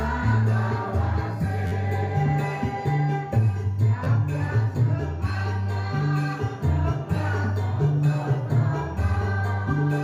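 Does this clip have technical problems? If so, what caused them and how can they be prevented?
Yes. A repeated buffer occurs at 1.67 to 1.72 s and again at 4.04 to 4.06 s. Fresh audio arrived late, so the device replayed its last block. The stutter points to a roughly 12 ms, 512-sample buffer played about four extra times, then twice. Little or no audio seems lost. Larger buffers, higher thread priority, or less competing system load would prevent it.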